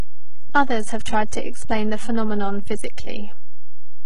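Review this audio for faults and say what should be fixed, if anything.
There's a DC offset across the whole clip: the waveform sits shifted off zero, eating headroom and leaving steady energy at the very bottom. A high-pass or DC-removal filter before export fixes it.

Throughout, there's heavy codec damage with nothing above 11 kHz and a treble that sounds rebuilt rather than real. That's likely HE-AAC compression at a very low bitrate, around 12 kbps, copying lower bands upward so harmonics don't line up across the crossover. Keep a higher-bitrate or lossless master and encode from that.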